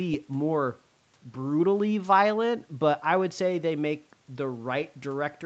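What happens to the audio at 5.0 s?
Nothing goes wrong at 5.0 s: the speech there comes through intact, with only the band limit of about 8 kHz that the call path applies throughout.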